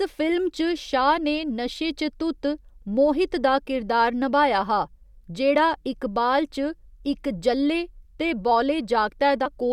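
Near the very end of the speech, from 9.45 to 9.48 s, compressed frames are skipped. Some coded frames were missing or rejected by the decoder, so playback leaps forward by around 70 ms, which fits about three 20 ms frames. Instead of a silent gap, as in a dropout, the speech simply jumps ahead at the join.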